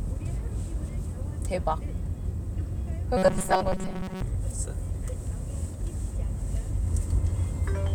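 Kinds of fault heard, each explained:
Robotic sound from repeated short buffers: From 3.17 to 4.23 s the sound turns into a rigid, metallic buzz pitched at 188 Hz. That's the likely result of new audio arriving too slowly, so playback keeps looping a tiny slice of about 5.3 ms instead of moving on. Most of that stretch is repeats rather than real material, which is why the buzz stays fixed while the underlying sound only loosely shows through.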